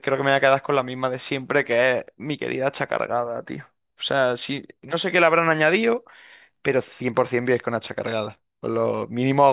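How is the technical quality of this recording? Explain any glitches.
No glitches can be heard in this speech recording, and its signal carries through without any technical fault.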